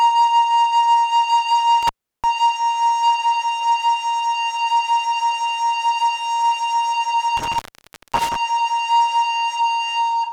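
At 1.83 to 2.24 s, and again at 7.37 to 8.36 s, the music cuts out through an intermittent contact, a loose cable or plug briefly losing its connection. The line stays open for about 0.35 s the first time and 0.55 s the second, with crackle as the contact breaks and remakes, and faint hiss in between. That edge crackle and residual hiss set it apart from a clean digital dropout, which falls to silence without them.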